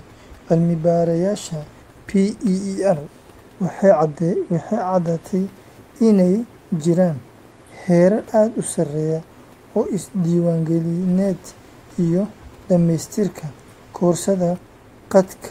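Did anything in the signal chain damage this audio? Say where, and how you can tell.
No, nothing in the signal chain has damaged this speech recording. There is faint background noise from the room, sitting about 37 dB below the speech, which belongs to the space the microphone was in rather than to any stage of the chain.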